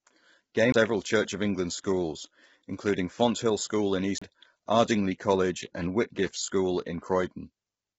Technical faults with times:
0.00-7.98 low-delay AAC compression
0.72 CD skip
4.18-4.22 CD skip

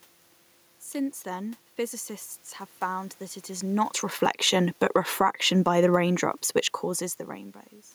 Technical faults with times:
2.84-6.48 automatic gain falling
5.22-6.08 automatic gain rising

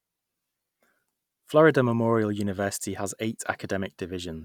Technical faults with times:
none

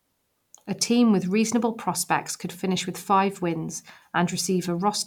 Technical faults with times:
none

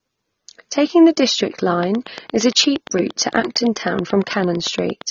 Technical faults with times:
0.00-5.10 AAC compression
1.83-5.02 train of clicks

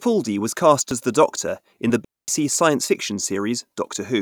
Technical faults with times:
0.91 audio missing between chunks
2.05-2.28 digital wireless dropout
2.89 audio missing between chunks
3.87 audio missing between chunks

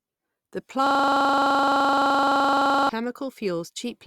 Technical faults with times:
0.87-2.89 system hang loop

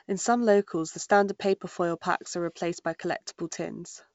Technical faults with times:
none

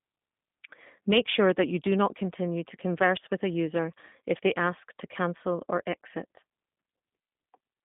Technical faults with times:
0.00-7.85 G.729 codec

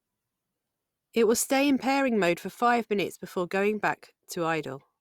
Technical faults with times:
none

